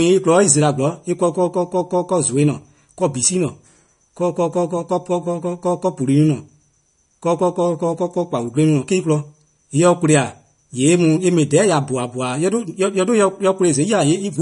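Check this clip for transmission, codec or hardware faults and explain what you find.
There's one fault here, and it runs through the whole speech clip: it sounds like MP3 compression, likely at a low bitrate, something like 40 kbps. Nothing comes through above 10.6 kHz, so the top end is chopped off flat. The encoder ran short of bits, so it dropped the treble and zeroed the weaker frequency lines, which flicker in and out between frames. That gives a plainly audible watery, swirly quality, with chirpy, metallic s sounds and smeared attacks.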